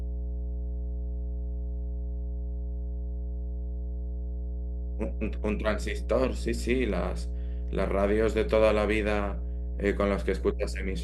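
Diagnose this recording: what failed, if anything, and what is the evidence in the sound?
A steady low 60 Hz tone with low harmonics runs under the speech for the whole clip, nearly as loud as the talker. This is mains hum from the analogue wiring: a ground loop or nearby transformer is coupling the power line into the signal.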